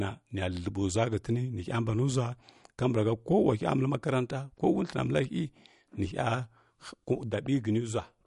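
Throughout this speech recording there is plainly audible MP3 compression damage, most likely from encoding at a low bitrate in the region of 48 kbps. Sibilants turn swirly and metallic, the voice carries a watery texture, and consonant attacks smear. On a spectrogram the energy stops at a hard ceiling near 11.2 kHz, and the region below it shows patchy holes where weak frequency lines flicker on and off between frames.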